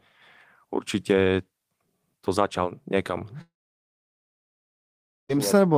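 The incoming stream likely stopped delivering packets at 3.41 s, a long network dropout that held until 5.31 s, so 1.88 s of the speech never reached the listener. The receiver briefly stretched the last fragment into a short, fading buzz, then its concealment ran out and left 1.79 s of silence. When the speech returns at 5.31 s, it resumes further along, with the lost stretch simply missing.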